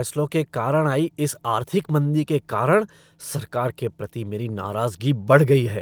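Nothing in this recording of speech stood out as a technical problem on listening.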